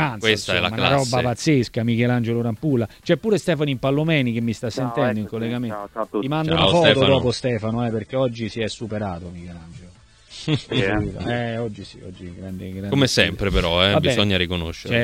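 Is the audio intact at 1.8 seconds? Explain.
Yes, the audio at 1.8 seconds is intact, with no dropout, click, distortion or other fault audible at that moment.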